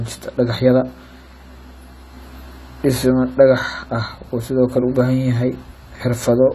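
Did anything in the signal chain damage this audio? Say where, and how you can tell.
Yes, at the codec stage. The speech is smeared and warbly throughout, and the spectrogram stops flat at 14 kHz, pointing to likely AAC compression near 32 kbps.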